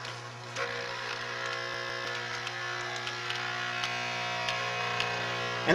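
From 1.74 to 2.05 s the audio shows a CD stuck on one turn. A scratch sends the laser back one track each revolution. The same 157 ms slice replays twice, with a brief mute at each jump. That gives a quick, even, mechanical stutter.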